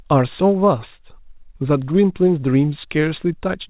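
No technical faults can be heard in this speech, which comes through a call path with nothing above 4 kHz.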